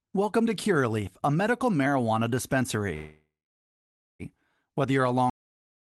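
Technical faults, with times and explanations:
2.95–4.22 s, call audio freeze: sound smears into a fading buzz, then about 0.9 s of silence before resuming intact, likely from delayed packets draining the jitter buffer. The spectrogram shows a blurred band dying to blank.
5.30 s, cut-off end: right after "you're a", audio stops mid-sound into digital silence with no decay. The waveform snaps to a flat line through the end.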